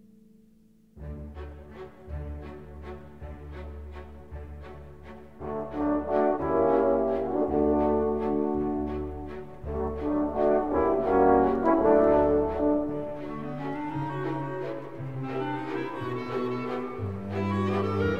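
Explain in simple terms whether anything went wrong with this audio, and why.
Nothing went wrong here: no dropouts, clicks, glitches or level jumps anywhere in the recording.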